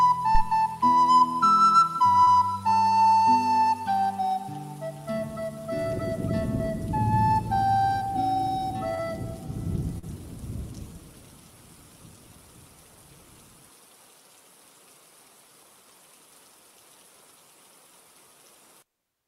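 At 0.35 s a phantom power thump: a supply switching on a live input sends a DC step through the coupling capacitors, producing a deep low-frequency knock that lasts until 0.44 s and dies away within about 20 ms.

Short concealed packet loss follows at 2.23 s, 8.95 s and 9.98 s. Each time about 40 ms of audio failed to arrive, and the receiver extended the preceding sound to bridge roughly 32 to 41 ms before blending back, heard as a brief smear or wobble.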